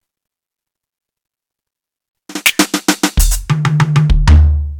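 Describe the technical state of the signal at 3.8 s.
Crackle sits on the peaks of the music here: hard clipping from 3.65 to 4.40 s. The signal is overdriven by about 6 dB past what a stage can pass, so peaks are sliced flat, spraying high harmonics.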